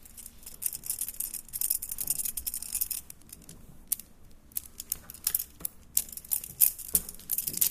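A sound recording with nothing technically wrong with it.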